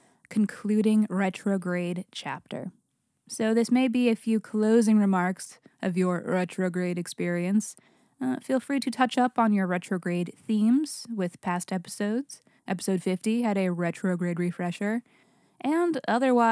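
No technical faults can be heard anywhere in the recording.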